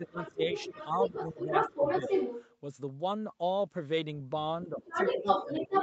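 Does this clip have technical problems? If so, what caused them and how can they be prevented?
Yes. From 0.0 to 2.1 s and again from 4.65 s to the end, the talker dips in pieces, by about 15 dB early on (under a second in all) and about 25 dB at the end. This is speech suppressed in double talk, likely because the echo canceller could not tell the talker from the far side's simultaneous echo and attenuated both. A full-duplex-capable echo canceller, or a headset, prevents it.

A second voice also leaks through from 0.07 to 2.54 s and from 4.79 s to the end, roughly as loud as the talker or a little louder. This is the other side's voice leaking through, likely loudspeaker playback that the echo canceller failed to remove from the microphone. Using headphones or lowering speaker volume prevents this.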